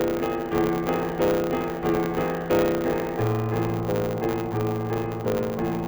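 From start to finish the music carries a block size mismatch (truncated): each block's tail gets dropped, giving a 100 Hz buzz and playback running about 1.09 times fast.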